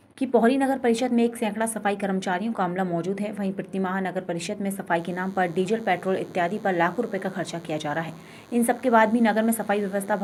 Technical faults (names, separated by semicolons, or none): DECT cordless phone buzz